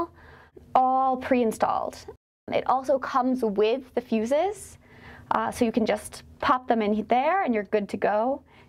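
No technical faults can be heard at any point in the clip.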